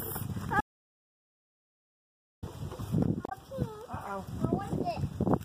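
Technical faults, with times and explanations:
0.61–2.43 s, audio dropout to silence: the sound cuts out abruptly, leaving about 1.82 s of silence with no room tone, then resumes mid-flow. The input was likely lost through a disconnected device or failed link while zeros kept being written.
3.25–3.32 s, damaged data in a compressed stream: a short blip of about 70 ms breaks into the sound. Corrupted bytes in the encoded stream made the decoder misread those frames and lose sync until it found the next valid frame header.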